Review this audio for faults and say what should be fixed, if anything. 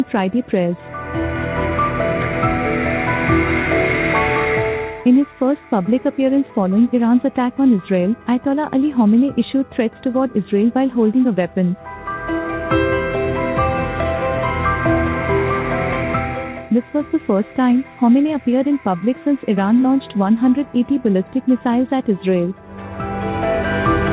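Nothing here needs fixing. The sound has come through a call path with a narrowband codec, so nothing above about 4 kHz is present, which fits G.711 A-law at 64 kbps.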